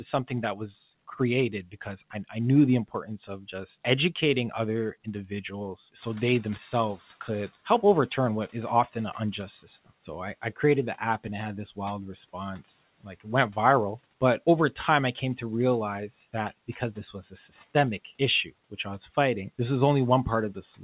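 Speech cut by the noise suppressor appears first at 1.52 to 1.86 s, then at 3.27 to 3.54 s. Short pieces of speech, about a tenth of a second each, drop by about 11 and 10 dB. They sound swallowed.

At about 6 s the room noise jumps by some 20 dB. The noise suppressor is catching up from 5.98 to 7.51 s. Its noise estimate lags, so the noise comes through with less reduction at first. It then sinks by about 9 dB over 1.53 s.

More speech cuts follow at 13.01 to 13.27 s, about 15 dB deep, and at 16.68 to 17.51 s, about 12 dB deep. Quiet sounds there turn faint.

Throughout, nothing is heard above 4 kHz, which fits a G.711 call codec.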